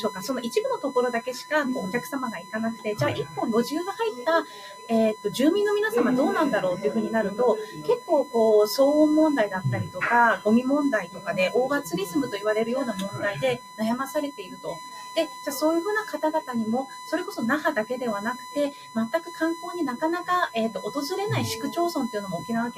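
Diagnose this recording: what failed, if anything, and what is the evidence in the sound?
USB whine: 1 ms bus frames leak current through the power or ground wiring, adding a fixed 1 kHz tone throughout, roughly 15 dB below the audio.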